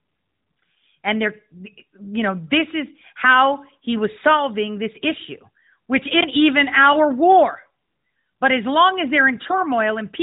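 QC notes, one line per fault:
9.35–9.56 s, AMR bit errors: just after "as long as", flipped low-priority bits scatter excitation pulses and skew gain, pitch and spectral values, so the sound turns hoarse and gargly. Harmonics smear into noisy texture below the 4 kHz AMR-NB ceiling.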